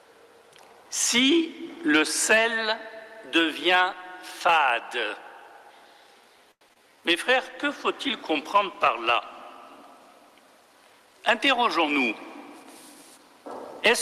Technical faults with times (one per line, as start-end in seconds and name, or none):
6.51-6.63 short stall from a late packet
6.69-6.71 skip ahead
6.73-6.77 short concealed packet loss
6.78-7.66 jitter buffer slow-down
7.33-9.49 call bitrate drop
10.93-11.58 jitter buffer speed-up